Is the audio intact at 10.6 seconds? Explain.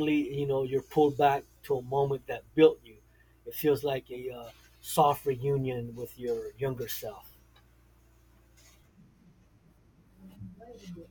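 No. From 9.01 s to the end, a wrong sample rate plays the speech at about 0.92 speed, which fits 48 kHz audio played at 44.1 kHz, so it sounds slower and roughly 1.5 semitones lower.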